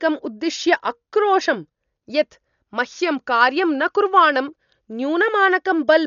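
Speech runs the full clip with heavy, constant codec damage, most likely from Dolby Digital compression at a low bitrate, which fits roughly 48 kbps. Nothing sounds above about 6.9 kHz, so the voice is dull, and lines left without bits below that are filled with rough, fluttering noise clinging to voiced tones. That grainy noise fill sets it apart from a plain low-pass filter, which would be dull but clean, and from MP3's metallic swirling.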